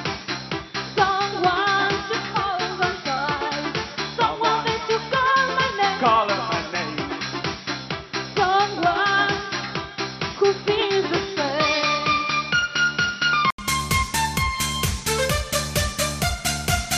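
From the start until 13.58 s, nothing sounds above 5.7 kHz, so the audio is dull and boxy, with faint added background noise. A brief 80 ms silence follows, then the sound opens up at similar loudness. This fits an input switched to a poorer device, likely.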